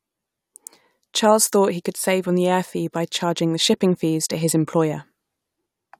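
A short piece of speech with nothing technically wrong to point to anywhere in it.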